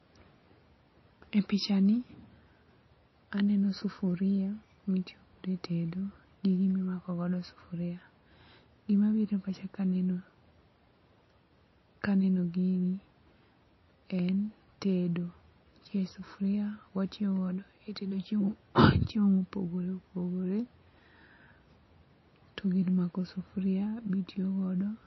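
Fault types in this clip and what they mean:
MP3 compression: The speech sounds watery and swirly throughout, with plainly audible codec damage. Nothing is heard above 5.8 kHz, so the treble is cut off flat. This likely comes from an MP3 encoder short of bits, which fits a low bitrate near 25 kbps.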